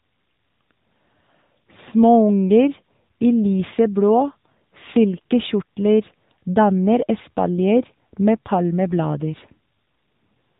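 From start to finish, the speech has passed through the AMR narrowband mobile codec at a low bit rate, which fits its 7.95 kbps mode. The codec samples at 8 kHz, so nothing above 4 kHz survives, and it rebuilds the voice from a vocal-tract model fed by a handful of pulses per 5 ms subframe. At this bit rate the damage is plainly audible: the speech sounds muffled, buzzy and synthetic, like a poor mobile call.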